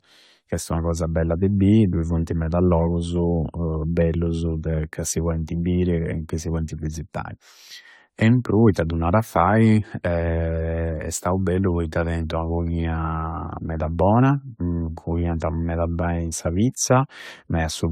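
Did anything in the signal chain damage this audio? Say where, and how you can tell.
Yes: generation loss at the codec stage, throughout the speech. It sounds swirly, smeared and hollow, with blurred attacks, and a spectrogram shows no content above 19.3 kHz with patchy holes. This likely comes from about five AAC-LC re-encodes, fitting 96 kbit/s, each requantising on a shifted frame grid.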